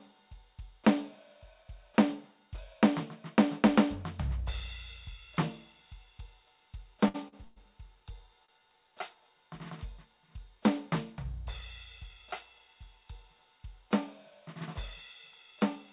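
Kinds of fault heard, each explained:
Short stall from a late packet: At 7.08, 7.28 and 8.45 s the music briefly hangs on one sound, held for about 61, 42 and 29 ms, with a faint buzzy edge, then carries on from the same point. A packet arrived late, the jitter buffer emptied, and the receiver stretched the last sound until it came, so nothing is lost. Unlike a freeze, each hold is too short to fade, and the music's band-limited sound, with nothing above 4 kHz, continues unchanged.
Call audio freeze: From 7.44 to 7.58 s the music stops moving forward for about 119 ms. The last sound is drawn out into a buzzy tail that thins without dropping to silence, then the music resumes where it left off with nothing skipped. This is likely a longer hold-up of packets that drained the jitter buffer. It differs from the short stalls in length: the filled sound lasts long enough to decay audibly rather than just sounding held.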